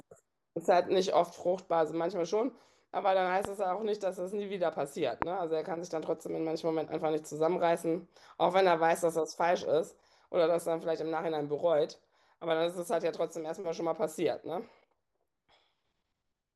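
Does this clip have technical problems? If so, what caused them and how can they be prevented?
Yes, there are two loud pops in this speech clip, one at 3.45 to 3.47 s and another at 5.22 to 5.24 s. Each is a single sharp hit lasting about 20 ms and sitting well above the speech: the first about 15 dB over it, the second about 20 dB. The speech carries on underneath both. The likely cause is a sudden voltage spike getting into the signal path, from a connector being bumped, a switch, static discharge or a driver hiccup, which the downstream circuitry turns into a short click-thump. To prevent it, secure cables and plugs, avoid switching or touching gear while recording, and keep the interface drivers stable and up to date.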